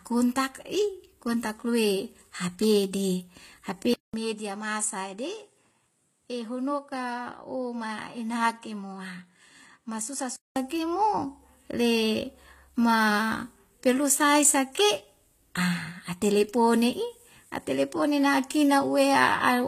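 From the start and through all of the speech, the audio carries layered compression damage, most likely from transcoding between lossy codecs. The artefacts fit a Vorbis encode at around 45 kbit/s followed by HE-AAC at around 24 kbit/s. Each stage smears and warbles the detail in its own way, and the two sets of errors are heard together. On a spectrogram nothing rises above 14.9 kHz at any point, with patchy, blocky energy near that ceiling.

At 3.94 s the input switches to a poorer device, likely a second microphone or a headset call profile. The audio drops out for about 200 ms, and the waveform shows a flat gap there. When the speech returns it is duller, boxier and roughly 10 dB quieter, with a faint new hiss about 45 dB below it. The spectrogram shows the top edge falling to 11.4 kHz until 10.56 s, when the fuller band returns.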